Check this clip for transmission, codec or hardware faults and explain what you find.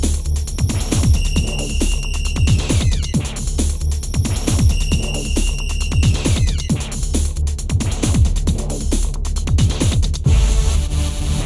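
Nothing stood out on listening.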